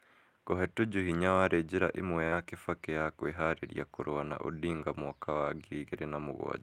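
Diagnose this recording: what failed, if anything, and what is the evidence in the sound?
At the network stage, packets went missing and the decoder rebuilt them from the low-bitrate copies carried in the following packets, so this is lost packets rebuilt from error correction. From 1.03 to 1.17 s and again from 2.32 to 2.42 s, the speech turns rougher and noisier without a gap, across stretches of about 80 ms and 60 ms.

The network also delivered some audio too late, and the receiver covered the holes with concealment, so this is short concealed packet loss. At 2.27 s a 40 ms hole was filled by extending the preceding sound, and at 2.44 s a 20 ms hole was filled the same way. Each one shows up as a brief smear or wobble.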